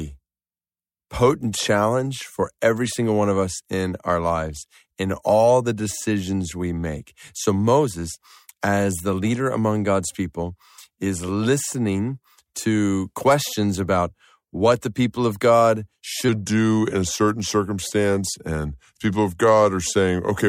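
A section at the wrong speed runs from 16.29 s to the end at 20.48 s, where the speech plays at 0.892 times its recorded speed. The voice drops about two semitones and drags, likely because that section was played against the wrong clock.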